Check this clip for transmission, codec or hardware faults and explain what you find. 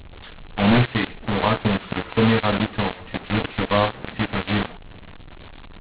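One fault runs through the whole recording: a mu-law and A-law mix-up, where mu-law-coded telephone speech has been decoded as A-law. The mismatched companding curves scramble sample levels, giving harsh distortion and hiss-filled pauses. Unlike clipping, quiet passages are noisy too, not just peaks. The 4 kHz G.711 band limit itself sounds ordinary.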